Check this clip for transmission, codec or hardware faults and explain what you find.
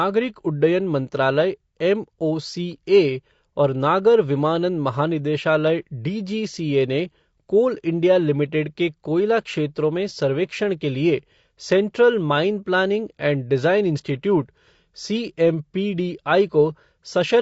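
There's one codec problem, and it runs the whole way through the speech. It's low-delay AAC compression, likely AAC-ELD at something like 32 kbps. At this low bitrate the coder can't spend enough bits on the voice's harmonics, so noise fills the gaps between them. Voices come out rough and grainy, with a thin, somewhat synthetic top end.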